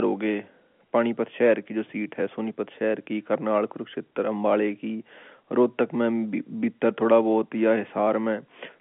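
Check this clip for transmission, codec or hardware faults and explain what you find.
I find no transmission, codec or hardware faults in this clip.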